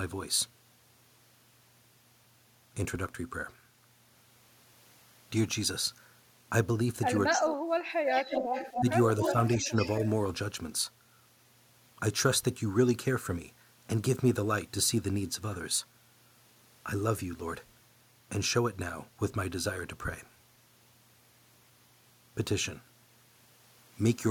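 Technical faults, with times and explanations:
7.32 to 9.72 s, speech suppressed in double talk: The speech sinks very deeply at 7.32 to 8.0 s. Shallower dips follow at 8.79 to 8.87, 9.21 to 9.34 and 9.57 to 9.72 s. Likely an echo canceller turning down both sides at once.
7.35 to 10.06 s, echo leak: A delayed copy of the speech trails about 275 ms behind, only slightly quieter. It is heard at 7.35 to 7.41, 8.08 to 8.91 and 9.22 to 10.06 s. Likely loudspeaker echo that the canceller did not remove.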